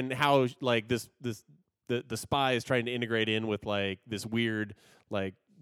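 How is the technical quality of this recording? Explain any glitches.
No glitches or technical faults can be heard here.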